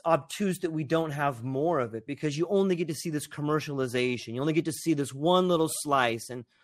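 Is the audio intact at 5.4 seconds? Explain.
No. At 5.4 seconds the speech sounds dull, gurgling and granular, as throughout the clip; this is likely MP2 compression, with upper sub-bands starved of bits and switched off.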